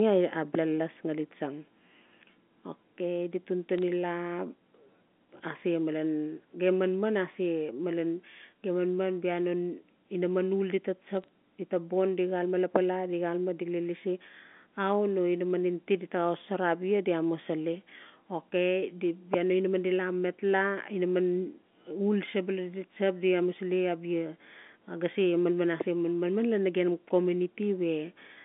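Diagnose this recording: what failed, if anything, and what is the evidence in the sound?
Bit errors on a digital phone line show up as two brief bursts of sharp ticks, at 3.78 to 3.83 s and 11.22 to 11.28 s. Flipped bits on the G.711 A-law link each corrupt single samples, with a low error rate, around a tenth of a percent at most.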